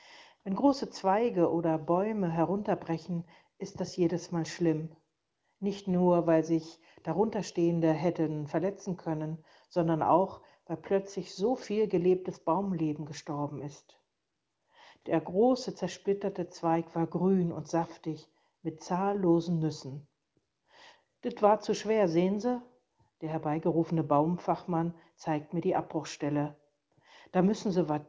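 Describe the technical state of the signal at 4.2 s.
At 4.2 s the signal is intact, with no fault audible at that moment.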